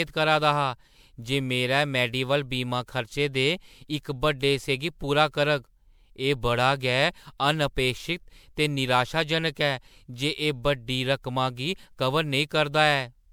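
From start to finish the speech has a swirly, hollow quality, with smeared consonant onsets and a watery shimmer that sounds worse than a single MP3 pass at what fits 128 kbit/s would give. The top of the spectrum stops near 20.8 kHz. This is likely generation loss: the audio seems to have been decoded and re-encoded around seven times, each pass quantising on a shifted frame grid, so noise and spectral holes pile up.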